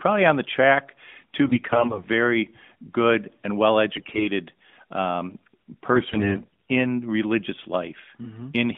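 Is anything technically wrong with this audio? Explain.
Yes. At 1.46–2.08 s, 3.92–4.27 s and 5.92–6.53 s the speech turns hoarse, scratchy and gargly while roughly keeping its pitch and level. These are AMR bit errors: weakly protected bits in the AMR-NB frames flip, misplacing excitation pulses and skewing fine pitch, gain and spectral values. The corruption grows heavier with each burst, reaching roughly a fifth of bits by the last. The narrowband phone band of about 150 Hz to 3.6 kHz is audible throughout.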